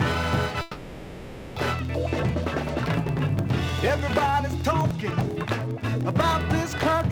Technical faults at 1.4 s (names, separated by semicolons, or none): periodic USB or driver dropouts; call audio freeze